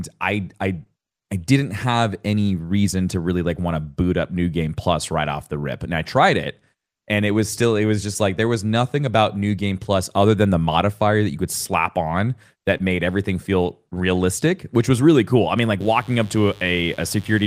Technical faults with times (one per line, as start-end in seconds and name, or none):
15.80-17.47 mains buzz